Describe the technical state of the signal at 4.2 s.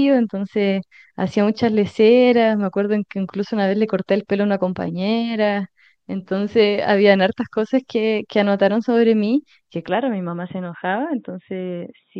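At 4.2 s the audio is intact, with no fault audible at that moment.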